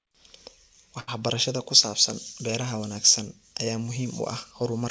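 At 1.00 to 1.09 s, just before "ku saabsan beeraha wanaagsan", a short stall from a late packet holds the speech about 76 ms. Nothing is lost, only stretched. The G.722 call path shows no content above 8 kHz.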